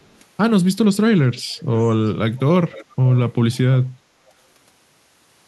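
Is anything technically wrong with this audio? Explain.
Yes. Two faults can be heard.

Echo leak occurs at 0.04–0.16, 1.37–1.83, 2.72–2.95 and 3.15–3.19 s. A faint delayed copy of the speech trails it, first by 400 ms, later by 456 ms. It ranges from about 40 dB to about 20 dB below the speech. Likely a loudspeaker's echo canceller let part of the voice through.

Background gated by the echo canceller occurs at 3.99–4.15 s. The echo canceller turned the microphone down while the loudspeaker played. The room sound dips by about 6 dB for roughly a sixth of a second, then returns.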